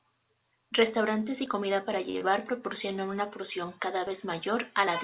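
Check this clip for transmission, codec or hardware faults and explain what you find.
Three kinds of fault occur in the speech, heard over a call path whose audio stops at 4 kHz, consistent with a narrowband codec such as G.711.

At 1.46, 2.65, 4.07 and 4.87 s the sound jumps ahead. The likely cause is a dropped buffer (overrun): the capture side fell behind, the hardware overwrote roughly 20 ms of samples each time, and the two ends were butted together with no gap.

From 2.10 to 2.30 s a short stall from a late packet occurs. A packet arrived late, the jitter buffer emptied, and the receiver stretched the preceding sound for about 43 ms before resuming where it left off. Nothing is lost, but the sound is held and slightly buzzy.

Within that stretch, from 2.18 to 2.23 s, there is a short concealed packet loss. About 20 ms never reached the decoder, so the receiver extended the last sound into the gap and faded back into the real signal, leaving a brief smear.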